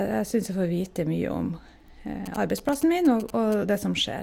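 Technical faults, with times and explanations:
2.26–3.54 s, GSM signalling bursts: A galloping dit-dit-dit of short 217 Hz buzzes sits roughly 15 dB below the speech. A nearby 2G phone's radio bursts are rectified by the audio circuit.
2.69 s, block of digital silence: About 2.7 ms of audio drops out to silence, which fits a 128-sample buffer left unfilled. The abrupt edges make a single tick.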